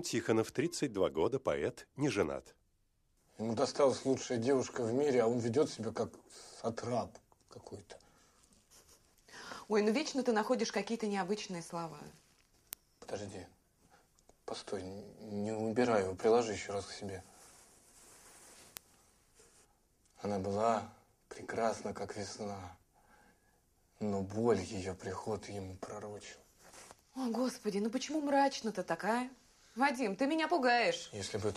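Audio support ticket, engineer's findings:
Word clock ticks, roughly every 1.5 s from 0.64 s to 30.87 s, about twenty in all. Sharp, uneven clicks. Receiver on the digital link is free-running, not locked to the sender, with roughly 15 ppm drift. Each slip drops or repeats one sample. Check the sync source.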